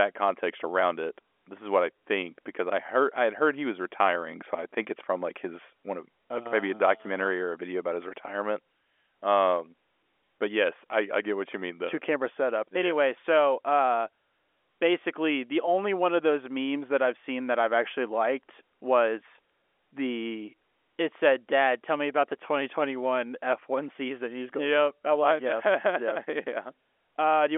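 Nothing goes wrong anywhere in this speech recording; it simply comes down an ordinary G.711 telephone line, with the usual narrow phone band running from about 300 Hz up to 3.4 kHz.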